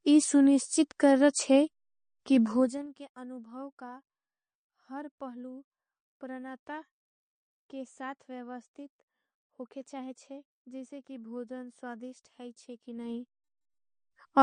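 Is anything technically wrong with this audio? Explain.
Yes, two problems. Throughout, nothing is heard above 9.6 kHz and plainly audible watery, swirly artefacts appear, likely MP3 compression at a low bitrate around 40 kbps. The swirl separates it from a simple low-pass filter.

From 2.48 to 2.90 s, after "सुनिश्चित कर रच्छे कि" and before "के अनुभाव का", zipper noise: the level drops by roughly 20 dB in unsmoothed 2 dB steps, about 20 per second. Each step clicks. The ticking comes only while the level moves, unlike random clicks.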